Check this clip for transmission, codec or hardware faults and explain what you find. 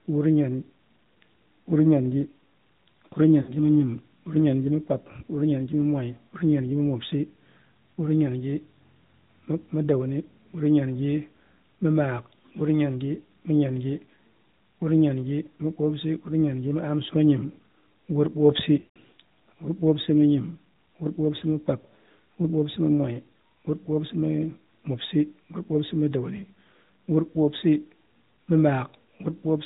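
Two faults are present: the whole clip passes through the AMR narrowband mobile codec, and speech frames are lost twice.

The AMR narrowband codec runs throughout, and its damage is plainly audible. The codec samples at 8 kHz and rebuilds speech from a vocal tract model fed by a few pulses. Nothing above 4 kHz survives, so the speech sounds muffled and boxy. The coarse pulse coding adds a buzzy, synthetic edge. The degree of this damage fits a mid-rate mode of about 10.2 kbps.

Lost AMR speech frames occur at 3.42 to 3.52 s and at 18.80 to 18.96 s. When frames are corrupted in transit, the decoder repeats its last good pitch and filter settings at falling gain. The first gap points to three frames, about 60 ms, where the sound is briefly drawn out and fades. The second points to eight frames, about 160 ms. There the sound smears and fades toward silence, then returns rough for a moment.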